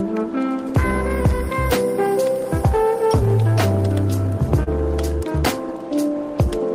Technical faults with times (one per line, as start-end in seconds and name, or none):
4.63-4.68 short concealed packet loss